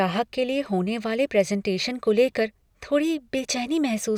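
The speech recording shows no technical fault at any point.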